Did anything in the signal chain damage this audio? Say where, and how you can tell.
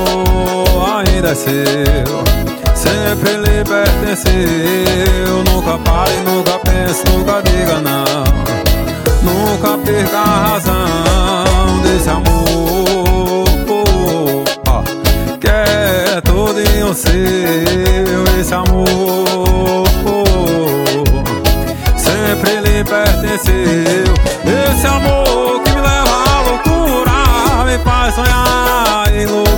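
No, nothing along the chain left a mark I can hear, so there's no damaged stage to point to here.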